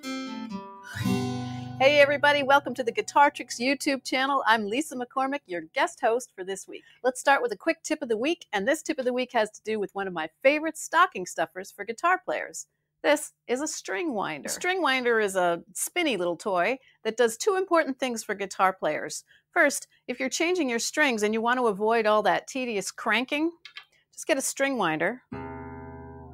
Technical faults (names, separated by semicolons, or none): noise suppressor applied to music or sounds; sound cut by the noise suppressor